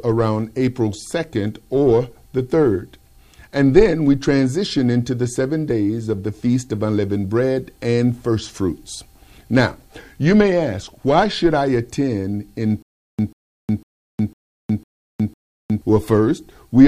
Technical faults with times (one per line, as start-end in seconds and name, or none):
12.82-15.82 stutter with silent gaps